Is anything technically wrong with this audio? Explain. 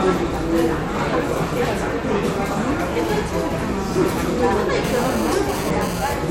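Yes. From 4.84 to 6.14 s there is GSM phone buzz: a nearby 2G phone's data bursts, about 217 per second, get rectified into a raspy 217 Hz buzz about 13 dB below the sound, drawing harmonic stripes on the spectrogram.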